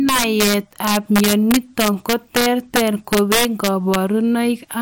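Integer overflow runs throughout the speech: about 7 dB of overdrive wraps around one percent of samples to the opposite sign, producing harsh cracks on louder syllables.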